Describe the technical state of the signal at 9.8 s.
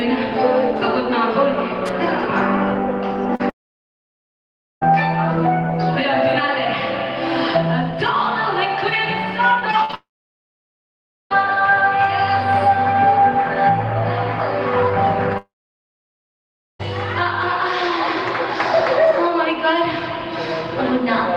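At 9.8 s the signal is inside a burst of repeated packet loss (robotic sound), running from 9.59 to 9.95 s. Four short holes, the longest 47 ms, are each patched by stretching the last received sound, so about a quarter of that stretch is synthetic fill. Unlike a single dropout or glitch, the holes follow one another closely, giving a choppy stutter with small pieces missing rather than one clean gap.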